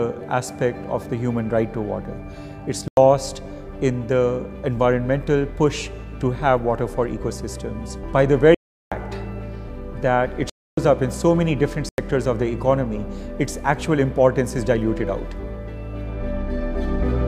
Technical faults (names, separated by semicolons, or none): block of digital silence